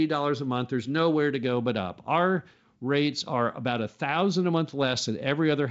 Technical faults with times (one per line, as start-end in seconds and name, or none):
none